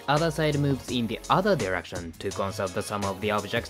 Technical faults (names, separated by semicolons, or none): none